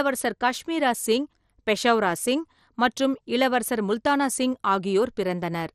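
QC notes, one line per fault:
Throughout: MP2 compression, likely at a low rate around 64 kbps. The speech sounds dull, with nothing above 14.4 kHz, because upper sub-bands are dropped when bits run short. The bands that remain are coarsely quantised, giving a plainly audible gurgling, granular texture.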